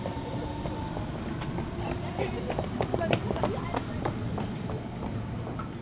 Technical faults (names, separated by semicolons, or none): none